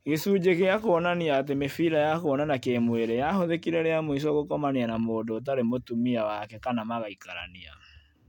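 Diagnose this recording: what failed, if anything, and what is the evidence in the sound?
Nothing failed; no stage in the chain shows trouble.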